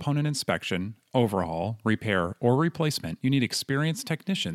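Nothing in this bit of speech trips any alarm, with no glitches, dropouts or odd artefacts turning up anywhere along the way.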